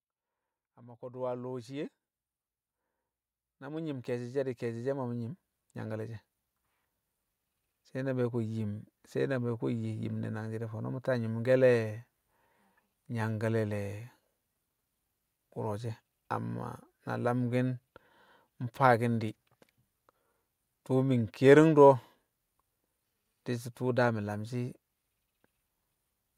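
A speech recording with two episodes of automatic gain rising. From 0.77 to 1.99 s the level climbs by about 6 dB, and from 3.58 to 6.27 s it climbs again by about 11 dB. In each case the gain control has judged the input too quiet and is turning itself up gradually, so the voice and the background noise swell together rather than the speech alone getting louder.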